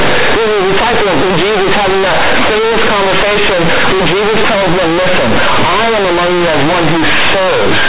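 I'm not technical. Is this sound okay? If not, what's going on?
No. From start to finish, the speech has a fault called companded audio read as linear. The recording was stored in mu-law, the squeezed format telephones use, and it was played back as if it were plain 8-bit sound, without being unsqueezed. Quiet parts come out as loud as loud ones, and the shape of the sound gets bent. You hear harsh, buzzy distortion throughout all 7.9 seconds, with heavy noise even in the pauses.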